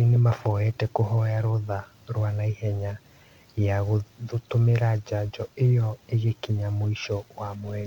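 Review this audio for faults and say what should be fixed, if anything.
No faults found in the speech recording; nothing needs fixing.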